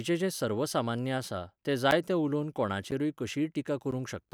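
Regular clicks break up the speech from 1.91 to 3.92 s, about three, one per second, each a roughly 10 ms gap of silence from periodic USB or driver dropouts.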